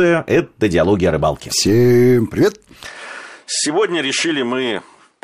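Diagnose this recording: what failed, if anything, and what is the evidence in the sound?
At the device and driver stage, the input most likely switched to a poorer device partway through the speech. From 2.85 s to the end, the sound turns duller, with nothing above 10.5 kHz. The change is abrupt, with no gap at the switch. The level drops by about 5 dB, and a faint new noise floor, far below the speech, appears. The new microphone or path has a narrower band, a different tone and its own self-noise.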